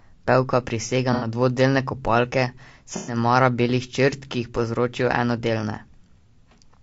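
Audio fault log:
throughout  low-delay AAC compression: The speech sounds rough and grainy, with a hiss filling the gaps between harmonics and a thin, synthetic top end. This is likely the low-delay AAC used for calls, at a rate that fits roughly 32 kbps. At this rate it has too few bits to code the pitch harmonics cleanly, and too few for the noise floor and high band.
1.13–1.27 s and 2.96–3.17 s  AAC frame loss with concealment: Two brief patches sound smeared and noisy, with a phasey blur. The first lasts about 90 ms and the second about 120 ms, which fits three and four lost frames. In each gap the decoder fills in by reusing the last good spectrum with randomised phase. This covers the hole but removes the real detail, so the sound turns into a diffuse wash before clean decoding resumes.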